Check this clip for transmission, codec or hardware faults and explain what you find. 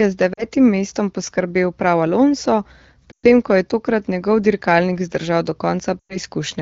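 Three brief dropouts point to lost AMR speech frames, heard over AMR wideband (HD Voice) speech that is clear and fits about 12.65 kbit/s.

At 0.34 to 0.46 s, between "je z" and "mestom poskrbel prav", at 3.12 to 3.26 s before "ko je tokrat njegov", and at 6.00 to 6.18 s, the speech drops to near silence within two frames, then returns thin. Radio errors corrupted 40, 120 and 100 ms of coded speech, so the decoder repeated its last good settings while lowering the gain.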